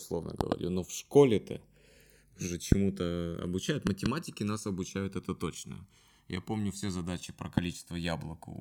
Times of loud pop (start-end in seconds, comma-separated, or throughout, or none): 0.41-0.54, 2.72-2.74, 3.87-4.08, 7.58-7.60